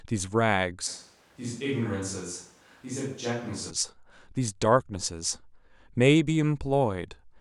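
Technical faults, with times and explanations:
0.89–3.69 s, switch to a distant microphone: the speech abruptly turns roomy and hollow, loses low-end body, drops about 5 dB in level, and gains a noise floor sitting about 30 dB below the speech. The transition in and out is instantaneous, not a fade. This is likely because the close microphone dropped out and a far-placed one took over, capturing more reflected room sound relative to the direct voice and less proximity bass.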